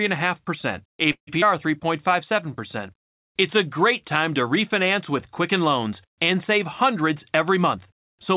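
At 1.12 s the speech stalls. The last sound trails on as a fading buzz that drops to silence for about a tenth of a second, then resumes at 1.29 s as if nothing were lost. This is a call audio freeze, most likely caused by packets held up in transit until the jitter buffer ran dry. The receiver stretched the final sound to cover the wait, which inserted about 150 ms into the speech and shifted everything after it later by that amount.

At 1.41 s, just after the freeze, there is a brief smear lasting a few hundredths of a second. This is short concealed packet loss. About 40 ms of audio never reached the decoder. The receiver filled only a sliver of that gap with a continuation of the preceding sound and blended back into the real signal. That pulled roughly 30 ms of the earlier added delay back out.

From 7.01 s to the end at 8.36 s, the speech runs faster while its pitch stays the same, at about 104% speed. 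This is a jitter buffer speed-up. The receiver was holding more audio than it wanted and trimmed many tiny pitch-period-sized pieces in a row, removing about 70 ms in total to bring the delay back down. All of this passes through a narrowband call path with nothing above 4 kHz, which fits G.711 at 64 kbps.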